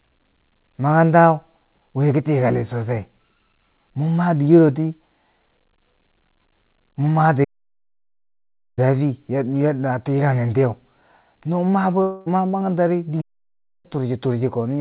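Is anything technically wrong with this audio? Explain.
Yes. The speech, which carries nothing above 4 kHz as expected of a narrowband call path like G.711 A-law, has two playback stalls and one long network dropout.

Playback stalls, from 7.44 to 8.79 s and 13.21 to 13.86 s: speech halts mid-flow for about 1.33 s and then 0.63 s, likely because the player ran out of buffered data or was blocked. On a waveform each is a flat line; on a spectrogram, a blank vertical band.

Long network dropout, from 12.02 to 12.28 s: about 240 ms of audio likely never arrived, and the receiver filled the whole gap by extending the last sound as a fading buzz or hiss. The spectrogram shows smeared, repeating texture instead of speech structure, and the speech resumes with that portion missing.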